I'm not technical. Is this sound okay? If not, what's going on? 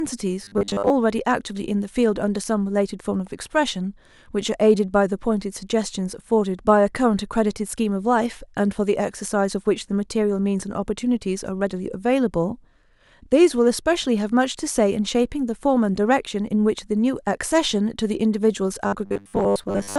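No. Twice the speech turns into a stiff, metallic buzz: from 0.44 to 0.9 s, and again from 18.87 s to the end. That's robotic sound from repeated short buffers. The likely cause is fresh audio arriving too slowly, so roughly 10 ms snippets get replayed, skipping most of the real sound and imposing a 100 Hz hum.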